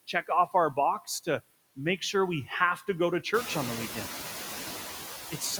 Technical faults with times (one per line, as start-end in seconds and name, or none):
0.00-5.59 noise suppressor artifacts